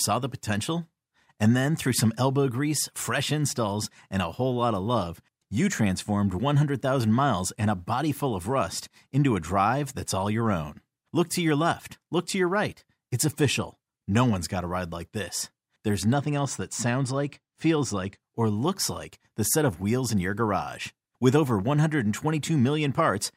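Speech clip with channel delay (comb filtering) from 16.13 to 18.19 s, just before "or looks like the": one channel lags by a couple of samples, so the mono sum notches near 10 kHz and dulls the top end.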